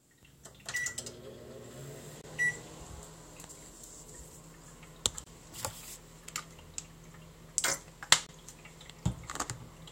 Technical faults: gap between chunks

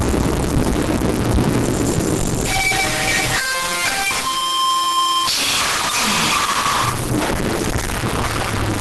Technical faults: stuck bit; Opus compression

